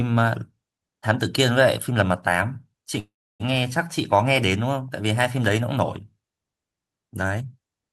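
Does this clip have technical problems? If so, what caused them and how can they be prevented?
Yes. From 2.99 to 3.42 s there is a call audio freeze: the last sound is stretched into a fading buzz, then about 0.31 s of silence, likely because delayed packets emptied the jitter buffer. Playback then resumes where it stopped, adding roughly 0.4 s of delay with nothing lost. Prevent it with a more stable network path and an adaptive jitter buffer.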